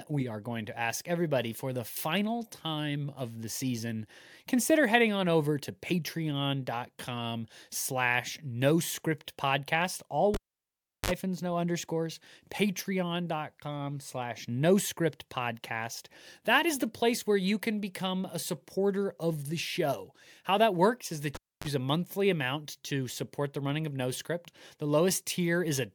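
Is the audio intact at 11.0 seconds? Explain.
No, 11.0 s falls inside a cable pulled and plugged in fault from 10.34 to 11.11 s: a pop, about 0.72 s of near silence, then a 53 ms burst of 50 Hz mains buzz as the plug's tip touches and a second pop before "no underscores". The buzz and pops set it apart from a plain dropout.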